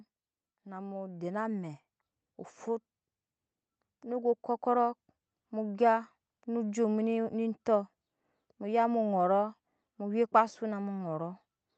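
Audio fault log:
0.5–1.84 s, automatic gain rising: the level control judged the speech input too quiet and stepped its gain up over roughly 1.3 s, lifting speech and room noise together by about 6 dB before it settles ahead of "mu fut". On a waveform the envelope widens steadily across that span; on a spectrogram every band, including the noise floor between syllables, brightens evenly, while the call path's cutoff near 8 kHz stays fixed above it.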